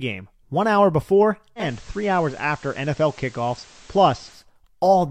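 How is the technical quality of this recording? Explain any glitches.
There is one clear glitch. From 1.56 s to 4.45 s, digital radio blending to analogue occurs. The receiver lost the digital stream and cross-faded, over 143 ms, to the station's FM broadcast. Hiss rises, roughly 30 dB below the speech. Level stays unchanged. Then it blends back.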